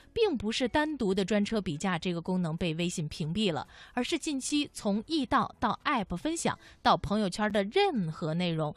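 At 1.49 s and again at 7.50 s the speech breaks with a gap between chunks: a 6.5 ms hole of silence at a join between 3.0 s chunks, where nothing is lost but playback stops. A waveform shows flat lines with abrupt edges, and a spectrogram shows thin vertical blank stripes.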